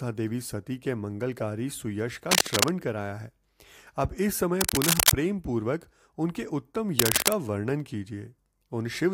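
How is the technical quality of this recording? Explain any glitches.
The recording is marred by three bursts of interference. Cable scratch noise appears from 2.31 to 2.71 s, from 4.61 to 5.12 s and from 6.99 to 7.33 s. Each time, dense, irregular crackling and rustling sits a few decibels above the speech for roughly half a second or less. The likely cause is a worn cable or connector being moved, its contact resistance fluctuating rapidly and modulating the signal with uneven noise.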